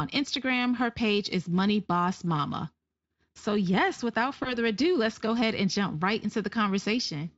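From 4.43 to 4.58 s, VoIP packet loss concealed by the speech codec: about 20 ms of audio went missing, and the decoder stretched the preceding sound into a short buzzy tone or coloured noise that fades, leaving speech weak for some tens of milliseconds after packets return. A plain dropout would instead leave silence or a click.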